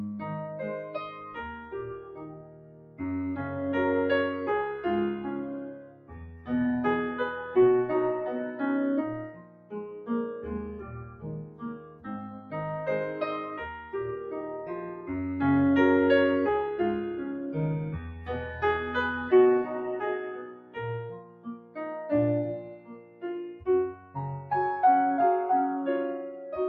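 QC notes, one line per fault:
Throughout: noise suppressor applied to music or sounds. A speech-tuned suppressor stayed active and treated steady tones, ambience and decays as noise, pulling them down by up to around 15 dB. Attacks survive while sustained material sinks, so the level pumps and thins.
0.83–3.01 s, 5.7–6.49 s, 9.28–10.09 s, 10.74–12.54 s, 18.13–18.29 s, 20.39–20.77 s, 21.11–21.77 s, 22.61–24.16 s: sound cut by the noise suppressor. The suppressor misjudged these stretches as noise and clamped them by about 13 dB (only about 5 dB at 18.13 s), so held sound ducks away and tails end early.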